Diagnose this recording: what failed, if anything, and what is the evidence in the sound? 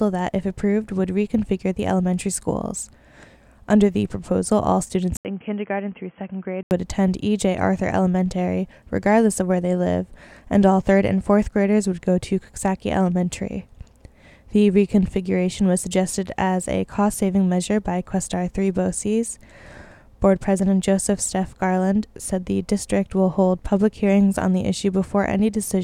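Input switched to a poorer device, 5.17 to 6.71 s: after an 80 ms silence the sound turns dull, with nothing above 3.3 kHz, drops roughly 5 dB, and gains a new noise floor around 35 dB down. This is likely a driver-level switch to a narrowband headset microphone.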